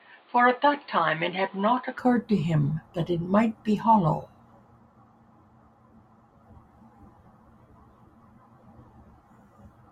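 Right from the start, up to about 1.98 s, the speech is dull and boxy, with nothing above roughly 4.6 kHz. It also sits a few decibels quieter and carries a faint extra noise floor well below the speech. Then it opens up abruptly, with no gap at the change. That pattern points to an input switched to a poorer device, likely a different mic or a headset call profile, for that opening stretch.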